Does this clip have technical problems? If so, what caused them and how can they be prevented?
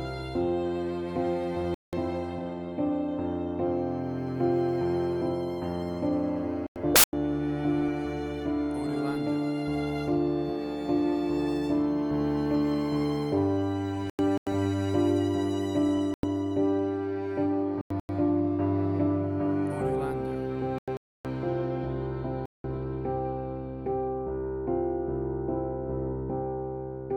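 Yes. Corrupt frames were muted at 1.55–1.94, 6.67–7.13, 13.97–14.65, 15.89–16.29, 17.75–18.09, 20.78–21.25 and 22.46–22.81 s. Damaged frames were rejected and replaced with abrupt silent holes, timing intact. Error-checked storage or transport would prevent this.

There's also a corrupt FLAC frame at 7.79–7.90 s, a short error peaking around -28 dBFS. Flipped bits threw off prediction from the damaged bit on. Enabling CRC checks in the decoder would catch it.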